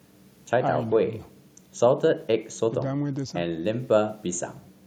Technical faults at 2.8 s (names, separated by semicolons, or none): none